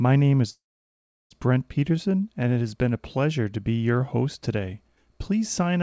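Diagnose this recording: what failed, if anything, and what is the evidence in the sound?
From 0.50 to 1.34 s the sound stops and is replaced by a brief fading continuation that drops into about 0.7 s of silence, then resumes exactly where it left off. This is a call audio freeze, likely from delayed network packets draining the jitter buffer; nothing is lost, but everything after arrives about 0.8 s late.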